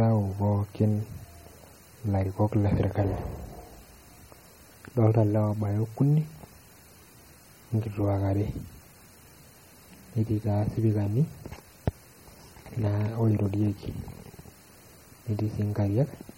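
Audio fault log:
Throughout, MP3 compression: likely an encoder starved near 32 kbps, cutting everything above 16.6 kHz and leaving plainly audible watery, swirly artefacts in the speech.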